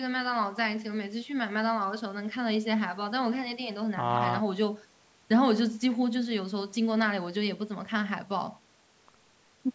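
No technical faults can be heard anywhere in the speech. The call microphone processing is audible as a high-pass filter trimming the lowest bass, and nothing reaches above 8 kHz.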